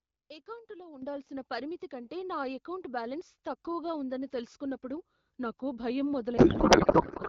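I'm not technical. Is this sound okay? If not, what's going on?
No. Twice the call software decided the microphone was too quiet and turned its volume up in one jump, a microphone volume stepped up fault. At 1.02 s the voice and background noise suddenly get much louder together; at 5.1 s there's a second, barely noticeable nudge.

At 6.37 s a codec payload misread begins. The sending and receiving ends disagree on how the compressed voice data is packed, so the receiver unpacks it wrongly. From there to the end of the clip, the speech is replaced by garbled noise and warbling that hardly follows it.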